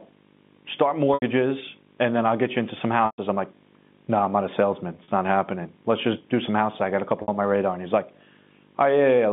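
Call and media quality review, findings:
Video/display buzz, whole clip: 50 Hz field-rate buzz with hash above it, plus a 15.6 kHz line-rate whine, about 25 dB under the speech. Probable screen or video-cable coupling. Spectrogram: 50 Hz harmonic comb, thin steady line at 15.6 kHz.

Packet loss with pitch repetition at 1.14 s (80 ms), 3.06 s (120 ms, between "get you into some" and "I'm like no I'm"), 5.04 s (40 ms, after "I'm not a salesman"), and 7.22 s (60 ms, before "on my radar"). Receiver concealment loops the last pitch period, giving a held buzzy tone on the short gaps and fading to silence on the longer ones, consistent with two to six lost 20 ms packets. Waveform: identical repeating cycles with a decaying envelope. The G.711 line band tops out near 3.6 kHz.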